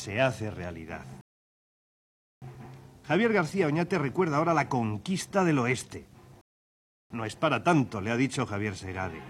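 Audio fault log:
1.21–2.42 s and 6.41–7.10 s, rebuffering stall: the sound drops to silence, then picks up exactly where it stopped. Playback ran dry waiting for data, adding 1.2 s and 0.69 s.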